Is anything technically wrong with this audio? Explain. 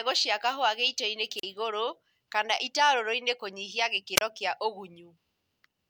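Yes, this speech clip has two wireless microphone squelch dropouts, at 1.37 to 1.43 s and 4.16 to 4.21 s. Each time the analogue FM radio link weakens until the receiver's squelch cuts the output, leaving a gap of about 38 ms and then about 31 ms. Briefly rising hiss precedes each hole of near silence before the speech returns. On a spectrogram, broadband noise appears just before a thin blank column; the waveform shows a short flat stretch.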